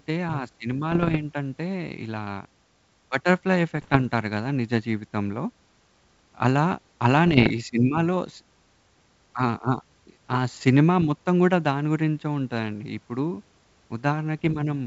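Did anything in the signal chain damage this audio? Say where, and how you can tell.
Yes: bit errors on an ADPCM link, at the transmission stage, at 0.92–1.17 s, 3.77–4.07 s, 7.27–7.51 s, 10.55–10.61 s and 14.39–14.54 s. Each burst brings pops and a rough, gritty texture with brief jumps in level. A flipped bit corrupts the decoder's step size and predictor state, so the disturbance rings on past the bit itself. The error rate is well under one percent. The wideband coding between bursts sounds like full-rate G.722, clear up to about 7 kHz.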